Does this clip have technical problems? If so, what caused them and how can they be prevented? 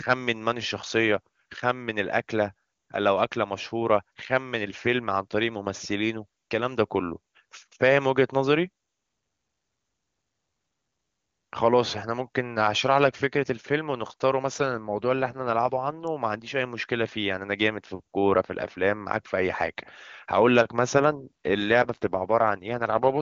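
Yes. From 14.53 to 16.08 s and again from 21.08 s to the end, the speech turns rough and synthetic, consistent with an AMR rate drop from roughly 23.85 to 8.85 kbit/s on a weak radio link. Unlike packet loss or a narrowband fallback, there is no gap and the bandwidth holds. Stronger radio coverage prevents it.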